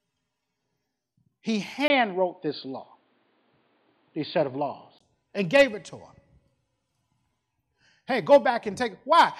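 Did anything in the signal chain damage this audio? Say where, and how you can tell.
Yes. At 1.88 s, just before "and gave it to", a 20 ms gap opens, then until 5.01 s nothing above 4.7 kHz passes, the level shifts around 5 dB, and new noise sits roughly 50 dB down. This likely indicates an input switched to a poorer device at the driver stage.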